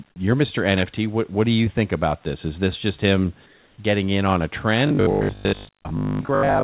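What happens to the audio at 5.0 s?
Robotic sound from repeated short buffers starts at 4.87 s, right after "getting in on a", and lasts to the end at 6.63 s. Audio likely arrives too seldom, so about 20 ms chunks get replayed over most of it, forcing a rigid, metallic 50 Hz buzz.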